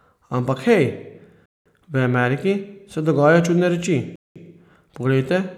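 Speech here, and it has a gap between chunks: silent holes of 200 ms at 1.46 s and again at 4.16 s, with 2.5 s of sound between them. Nothing's missing. Silence is just inserted at each chunk join, so the speech gets cut off and picks up again.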